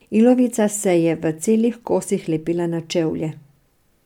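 Nothing goes wrong anywhere in this bit of speech, so there's no technical fault to point out.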